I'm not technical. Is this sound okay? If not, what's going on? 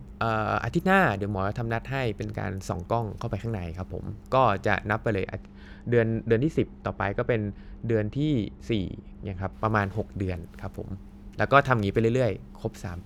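No. From 5.22 to 9.53 s there is wrongly applied de-emphasis: a treble cut meant to undo an earlier boost was applied to speech that never had that boost, or was applied twice. The high frequencies are turned down, so the voice sounds dull and muffled.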